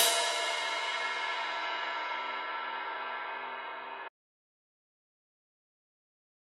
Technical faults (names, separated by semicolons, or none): audio dropout to silence